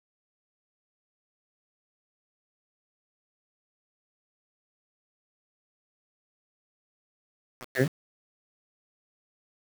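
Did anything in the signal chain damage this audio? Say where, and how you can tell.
Yes, the sample-format conversion stage. Throughout the speech there's grainy distortion riding on the sound, roughly 15 dB under it, and quiet tails sputter or drop out. That's low bit depth without dither: likely rounded to about 5 bits, so the error tracks the signal.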